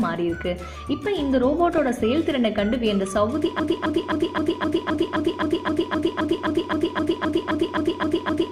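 A short stretch of audio with two problems. First, there's DAB burbling at 1.66–1.94 s, 4.95–5.17 s and 7.46–7.51 s: brief blips of noise in single sub-bands. That's what happens when bit errors slip past the error correction into the MP2 data and corrupt samples and scale factors for a frame at a time. The spread of the first two bursts fits roughly a dozen frames each and the last about five, at an error rate on the order of a tenth of a percent. Second, from 3.60 s right through to the end there's a broken-record loop. A 0.26 s fragment repeats back to back, around 19 times, and whatever should have played there is simply gone. That's most likely a stall in the player, encoder or stream that kept resending the last piece it held.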